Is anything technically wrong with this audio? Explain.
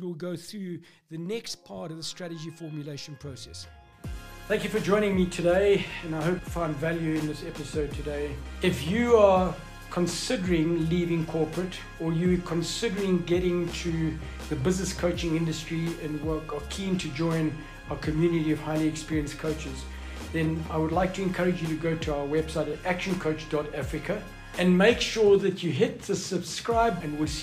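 Yes. Damaged data in a compressed stream shows up twice, at 6.39 s and 27.01 s. At each point a stretch of the encoded bytes is corrupt, so the decoder misreads the frame, loses sync and hunts for the next valid frame header. What comes out is a very brief garbled blip or squawk.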